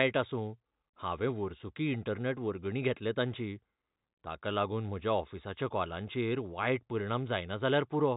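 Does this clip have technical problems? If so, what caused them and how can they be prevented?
No, nothing here needs fixing: the speech comes through G.711 mu-law telephone coding at 64 kbps, so it stops short of 4 kHz and carries at most a faint hiss that rises and falls with the level, which is simply how that format sounds.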